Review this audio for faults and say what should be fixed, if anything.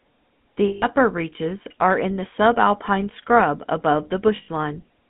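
The whole speech clip carries the GSM full-rate codec's signature: a buzzy, gravelly roughness laid over the voice, plainly audible throughout, with the line confined to roughly 150 Hz to 3.5 kHz. The codec rebuilds speech from a vocal-tract model driven by a sparse, regularly spaced pulse excitation, which produces that grain. Plain band-limiting alone would sound muffled but clean, and the grit points to a 13 kbps GSM stage. Prevention: carry the call over a wideband codec such as AMR-WB or Opus end to end.

Lost GSM frames occur at 0.68 to 0.87 s and at 4.36 to 4.48 s. Instead of silence, the sound freezes into a rough, metallic ring, because the decoder keeps reusing the last good frame's parameters. The first gap lasts 140 ms and the second 120 ms, which fits roughly seven and six 20 ms frames. A plain dropout would cut to silence or click, but these gaps hold a ringing tone. Prevention: reduce radio-link or transport errors, for example with better coverage or stronger channel protection.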